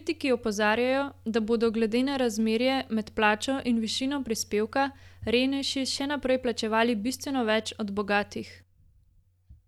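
No dropouts, clipping, glitches or other technical faults can be heard anywhere in the speech recording.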